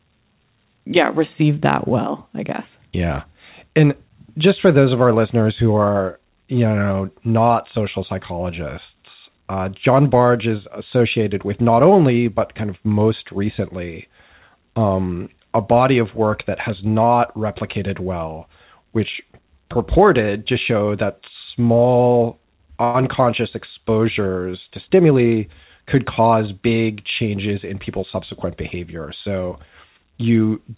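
A speech clip carried over a call path whose G.711 A-law codec leaves nothing above 4 kHz, with two timing faults. Between 22.84 and 22.96 s, just after "to show that small" and before "exposures to", there is a call audio freeze: the last sound carries on for about 100 ms as a short fading buzz or hiss, then the speech resumes intact, likely because delayed packets left the jitter buffer empty. That pause pushes everything after it roughly 100 ms later. The buffer then holds more than it targets, so from 24.90 to 25.96 s, after "exposures to" and leading into "cause big changes in", a jitter buffer speed-up trims repeated pitch-period-sized slices, about a tenth of a second in total. The speech plays at about 109% speed with its pitch unchanged, sounding briefly rushed.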